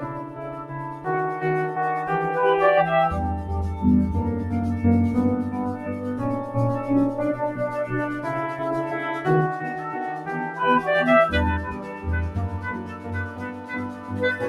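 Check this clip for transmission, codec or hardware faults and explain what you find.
One fault runs through the whole clip, with four spots where it bites hardest.

A noise suppressor designed for speech was left running on non-speech sound. It reads steady tones, ambience and decays as noise and turns them down, so the level swings by around 10 dB and the sound pumps and thins.

The same suppressor cut sound hardest from 0.0 to 1.06 s (about 9 dB), 9.75 to 10.58 s (about 8 dB), 11.71 to 12.07 s (about 8 dB) and 12.54 to 14.22 s (about 9 dB). Sustained parts sink and fading tails are clipped short, while sharp onsets still pass.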